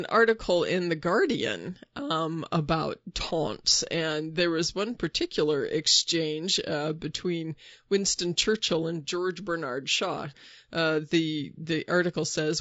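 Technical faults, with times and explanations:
throughout, low-delay AAC compression: the speech is rough and grainy for its whole length, with a hiss-like haze sitting between the voice harmonics and a top band that sounds thin and synthetic. The likely cause is AAC-ELD at a rate that fits about 32 kbps, whose coarse quantization at that low bitrate leaves noise between the harmonics. A spectrogram shows smeared, noisy gaps between the harmonic lines and patchy, blocky energy in the upper band.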